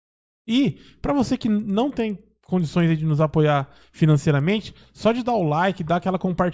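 A speech recording with a resampler restarted on every block throughout: faint ticks at 10 Hz, consistent with conversion from 24 kHz to 16 kHz in separate 100 ms chunks, show as evenly spaced vertical spectrogram lines during speech.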